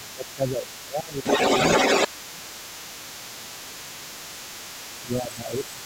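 From the start to 5.85 s a second voice runs under the talker at roughly equal loudness: the other side's voice leaking through, likely because the echo canceller left loudspeaker pickup in the microphone. Unlike room reverberation, it is a separate talker, not a smeared copy of this one.

At 0.0–1.25 s, 2.07–2.42 s, 3.07–4.15 s and 5.01–5.82 s the talker's speech is suppressed in double talk, dipping by about 15 dB (about 10 dB in the last span), likely from the canceller cutting both voices at once. These dips track the overlaps rather than arriving at random, as network dropouts would.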